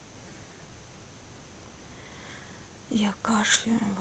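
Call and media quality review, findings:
No findings in this call and media quality review; the speech passes through the Opus call path as expected.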